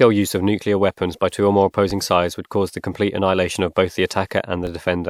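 A DC step at 1.91 s, just after "by two or more", shifts the waveform's zero line, producing a low thump, and the offset lasts until 4.67 s.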